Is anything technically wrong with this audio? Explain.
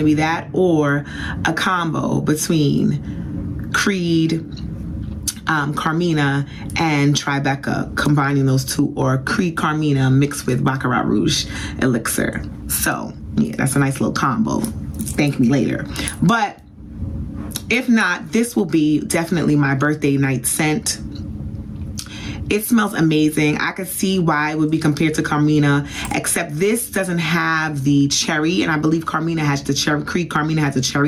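Yes. Gain pumping runs through the whole clip. The gain swings by around 20 dB, and loud and soft passages end up squashed together. The likely cause is input gain set far too high, with a fast limiter or compressor clamping each peak and releasing between them. A waveform shows a flattened envelope.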